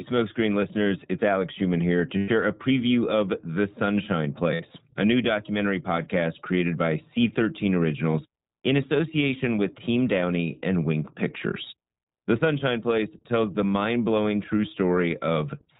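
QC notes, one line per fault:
Throughout: iLBC codec. The band stops at 4 kHz, so the speech sounds narrow and telephone-like. The damage is plainly audible. The speech stays clear but has a rough, slightly synthetic edge. This comes from the way each 20 ms frame's excitation is coded on its own, without help from the frame before. The grain fits the 15.2 kbps mode of this codec. Fine detail in the waveform is simplified, and the coarseness follows from that.
2.18 to 2.30 s and 4.54 to 4.61 s: lost iLBC frames. The first gap lasts 100 ms, after "here to" and before "a preview of". That length fits about five lost 20 ms frames. The second lasts 60 ms, just before "a new documentary podcast", which fits about three frames. In each gap the decoder repeats the last pitch cycle mixed with noise. This gives a held, buzzy vowel. Because the frames stand alone, the speech recovers almost at once afterwards.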